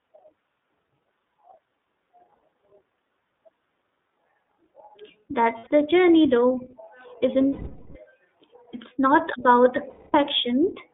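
Throughout the speech, the iLBC codec limits the line to roughly 200 Hz to 3.6 kHz, so it sounds thin and boxy. Coding damage is plainly audible as a rough, slightly synthetic grain on the voice. That character, and the way each loss recovers cleanly, points to iLBC at 13.33 kbps with 30 ms frames. Each frame's excitation is coded independently, so clarity holds but the texture turns artificial.

Lost iLBC frames then cut holes in the stream at 2.34 to 2.43 s and 5.58 to 5.67 s, each about 90 ms. Longer ones follow at 7.47 to 7.96 s, about 480 ms, and 9.89 to 10.15 s, about 240 ms. The decoder repeats the last pitch cycle mixed with noise, so each gap sounds like a held, buzzy vowel. The two longer gaps fade as the concealment runs on. Normal sound returns almost immediately after every gap.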